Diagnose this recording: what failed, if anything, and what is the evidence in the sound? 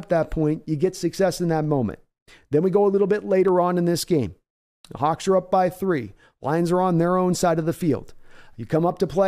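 Two isolated sharp clicks cut through the speech, one at 1.64 s and another at 3.48 s, each a single instant with no gap in the sound around it. The likely cause is dropped samples at the driver or buffer stage: a fraction of a millisecond of audio went missing, so the waveform jumped straight from one value to a later one. That step discontinuity is what sounds as a click and shows as a thin vertical line across the spectrum.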